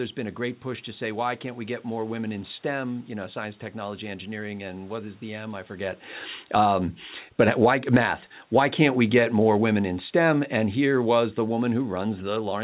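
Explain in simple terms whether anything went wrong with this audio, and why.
Automatic gain falling, from 6.39 to 6.73 s just after "I forget", and again from 7.25 s to the end: the call's level control decided the sound was too loud or too noisy and turned itself down. The voice and the room noise behind it sink together.

Automatic gain rising, from 6.63 to 7.04 s and from 7.87 to 9.03 s: the same control judged the sound too quiet and turned itself back up. Voice and background swell together, overlapping the downward moves, so the level pumps up and down.

The talker shifting position around 5.5 s and the room's own background noise are part of the recording, not faults. The narrow, phone-like sound, with nothing above 4 kHz, comes from the call line.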